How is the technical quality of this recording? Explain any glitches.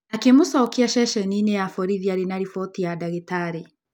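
Two bit error spikes stand out. At 0.66 s, and at 2.15 s between "ya borithi" and "arĩ na riboti ya", a single flipped bit throws one sample briefly out (about -15 and -28 dBFS), giving a sharp broadband tick.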